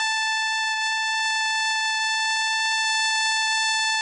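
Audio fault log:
Throughout: Vorbis compression, likely the cause of this music's dull, grainy sound. Nothing survives above 10.6 kHz, so the top end is cut off, and the treble that remains is quantised so coarsely that fine detail turns into hiss of similar energy. Tones sound roughened and attacks blurred. The damage is heavy, which fits a low bitrate of around 23 kbps, where the encoder keeps only a smooth spectral floor and a crude residue.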